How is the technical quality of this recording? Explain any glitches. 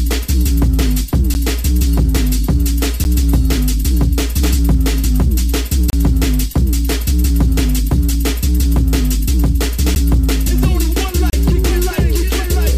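The technical quality is let down by five dropouts, each a block of digital silence. The output buffer was likely not filled in time, so short runs of samples came out as zeros: 10 ms gaps at 1.34 s, 3.04 s and 9.95 s, and 30 ms gaps from 5.90 to 5.93 s and 11.30 to 11.33 s. The signal drops straight out and returns with no fade. The 10 ms blocks sound like sharp ticks, while the 30 ms blocks open into brief audible holes.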